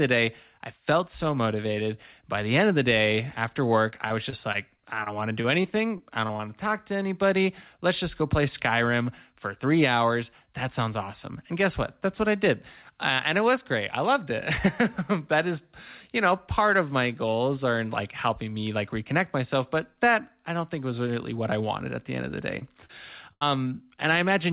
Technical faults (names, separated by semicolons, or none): repeated packet loss (robotic sound); short concealed packet loss; burst of packet loss